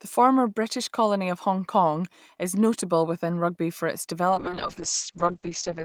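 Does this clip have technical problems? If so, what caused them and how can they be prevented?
Yes. A call bitrate drop from 4.3 s to the end cuts the encoder from 32 to 7 kbps, muffling the speech as bandwidth narrows from 20 kHz to 8 kHz. To prevent it, reserve steadier network capacity or tune congestion control so the bandwidth estimate doesn't collapse.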